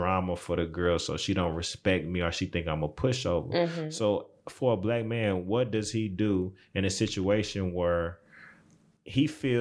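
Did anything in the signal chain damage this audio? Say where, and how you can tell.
No, nothing in the chain audibly damaged this speech recording, and no stage shows any trace of a fault.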